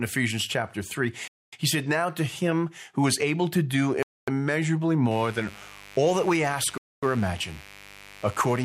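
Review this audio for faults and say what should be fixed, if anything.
Gaps between chunks: the speech drops into hard-edged silent holes of 250 ms at 1.28, 4.03 and 6.78 s, after every 2.5 s of audio, like a player starting each chunk late. Buffer ahead or drop the padding so chunks join seamlessly.

Mains buzz: from 5.11 s to the end there's a raspy 50 Hz buzz, about 20 dB under the speech, from switching spikes leaking in. Shield or ground the cabling and keep dimmers off the signal path.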